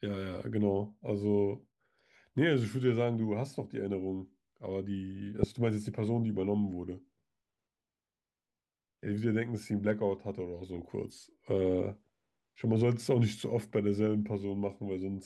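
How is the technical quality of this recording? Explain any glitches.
There's a spot of DAB burbling in the speech twice, at 5.41 to 5.44 s and 10.69 to 10.82 s. Weak reception lets bit errors slip into the MP2 data, so single sub-bands get short noise blips or jump in level for up to a frame.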